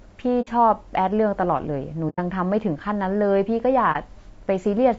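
Throughout, the speech is rough and grainy, with noise between harmonics, likely low-delay AAC compression near 32 kbps; spectrograms show smeared harmonics and a thin top band. AAC frame loss with muting leaves soft-faded holes at 0.41–0.49 s and 2.09–2.19 s and a brief dip at 3.92–3.96 s, seen as tapered waveform gaps and blank spectrogram columns.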